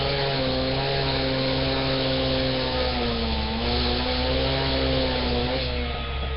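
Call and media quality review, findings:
Rough, hissy halo and smeared, underwater texture on the sound, present throughout. Likely Nellymoser Asao compression, Flash-era microphone codec: fixed block coding with too few bits, so weak bands get none and are refilled with noise. Damage is heavy. Spectrogram: hard ceiling at 5.3 kHz with nothing above, blotchy noise-filled patches below in place of clean partials, block-wise smearing along time. Waveform: grainy fill between transients. Artefact level fits a low bitrate near 22 kbps.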